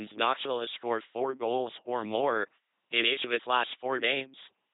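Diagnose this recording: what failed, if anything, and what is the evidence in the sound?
The codec stage is at fault: the speech has passed through an LPC-10 vocoder for the whole clip. The sound is a buzzing, mechanical robot voice with nothing above 3.8 kHz. Each moment is synthesised as either a pulse-driven buzz or a noise-driven hiss from a low-order vocal tract filter, so the natural mix of voiced and breathy sound is lost. The damage is heavy, consistent with a 2.4 kbit/s parametric coder.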